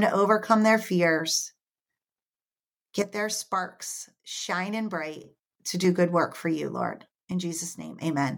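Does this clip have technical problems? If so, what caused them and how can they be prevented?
Yes. Twice the level drops abruptly and speech and background fall together: by about 9 dB from 3.02 to 5.24 s, just before "to do good work", and by about 6 dB from 7.32 to 8.02 s. This sudden gain jump is likely an unramped sample-to-sample gain change. The waveform envelope steps sharply, and the spectrogram darkens evenly with straight vertical edges. Ramping every gain change over a few milliseconds prevents it.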